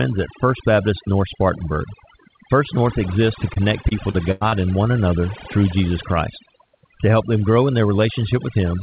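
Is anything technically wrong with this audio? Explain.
Yes. Overdone noise removal runs throughout: bands near the noise estimate are gated off, taking quiet parts of the voice with them. On a spectrogram the background sits near-black with scattered twinkling specks, all under the telephone-band 4 kHz ceiling.

Repeated packet loss (robotic sound) runs from 3.54 to 4.54 s, between "exists to" and "and one another through". Lost stretches up to 95 ms long are patched by extending the previous sound, covering about a fifth of that second. The result is choppy, with pieces missing. The waveform shows repeated, smeared segments, and the spectrogram shows frozen, striped patches.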